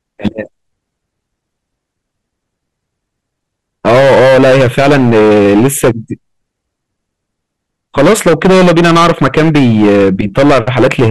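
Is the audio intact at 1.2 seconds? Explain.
Yes, the audio is intact at 1.2 seconds, with no fault at that moment.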